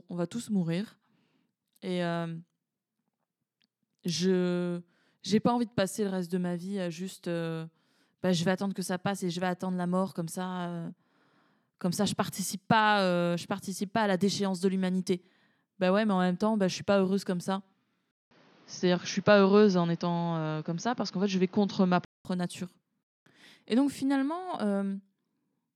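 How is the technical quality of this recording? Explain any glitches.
One glitch affects the speech. From 18.11 to 22.25 s, after "pas heureuse comme ça", a 200 ms gap leads into duller, boxier sound, likely from an input switched to a poorer device. Nothing above 6.6 kHz survives, the level shifts somewhat, and faint new background noise appears. A spectrogram would show a flat ceiling at 6.6 kHz, and the waveform a brief gap and a level step.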